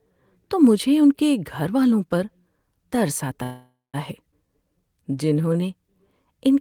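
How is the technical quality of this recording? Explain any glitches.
The recording has three network glitches packed into about two seconds of speech, all from packets reaching the receiver unevenly.

From 3.43 to 3.96 s there is a call audio freeze. Packets were likely held up in transit, so the jitter buffer ran empty. The receiver stretched the last sound into a fading tail that drops to silence for 190 ms. When the audio resumes it picks up where it stopped, with about 0.5 s of gap added and nothing lost.

At 4.32 to 4.34 s there is a skip ahead. A stretch of audio, roughly 150 ms, was discarded while later audio was already waiting, so playback jumps forward almost seamlessly. The speech on either side is spliced together, with a short chunk simply gone.

From 4.47 to 5.61 s there is a jitter buffer slow-down. Running low or having just raised its target delay, the buffer rebuilt its reserve by repeating single pitch periods, adding 148 ms. 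The speech plays at 88% speed with unchanged pitch, so sounds are drawn out and may carry a slight warble.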